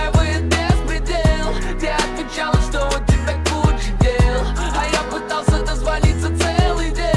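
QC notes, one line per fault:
No faults were found in this clip. Nothing in the audio called for a QC entry.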